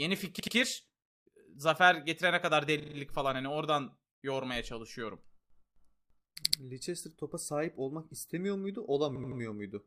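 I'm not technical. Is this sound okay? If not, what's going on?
No. The speech stutters four times because of repeated frames. A tiny slice of the audio was saved or sent more than once, so it plays again right away. At 0.39 s, an 80 ms slice plays twice more. At 2.79 s, after "zafer getirene kadar", a 40 ms slice plays four more times. At 6.43 s, an 80 ms slice plays twice more. At 9.15 s, after "topa sahip olmak istemiyor", an 80 ms slice plays three more times. Each stutter makes the clip slightly longer.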